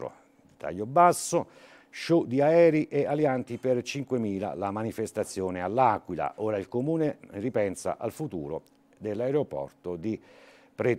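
No technical faults can be heard anywhere in the audio; the signal stays continuous and stable throughout.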